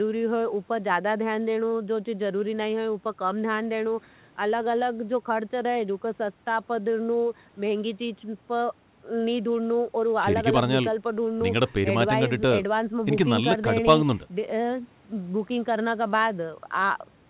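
Nothing's actually wrong with this bit of speech: it just carries the narrow, phone-like sound of a call line, with nothing above about 4 kHz, which fits an ordinary narrowband telephone codec.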